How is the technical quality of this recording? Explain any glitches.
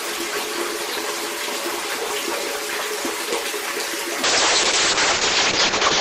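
Quality drops sharply near the end. At 4.24 s a call bitrate drop sets in and lasts to the end. The encoder, starved of bits, codes coarsely and the band narrows from 20 kHz to 8 kHz, consistent with a fall from roughly 64 kbps to 6 kbps. The sound turns muffled and rough.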